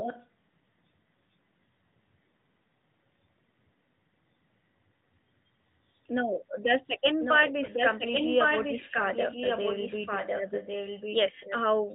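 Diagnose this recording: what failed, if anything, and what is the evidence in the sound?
Call processing: echo leak. The speech comes back about 1.1 s later as a fainter copy. It appears from 0.0 to 0.27 s at about 10 dB down, then from 7.2 to 11.57 s at about 5 dB down. A far-end echo canceller likely passed its loudspeaker pickup.

Network: lost AMR speech frames. At 7.66 to 7.70 s the sound briefly dips or warbles. This points to one 20 ms frame failing its radio checksum. The decoder then replayed the previous pitch and vocal tract settings at lowered gain, within the light AMR narrowband coding.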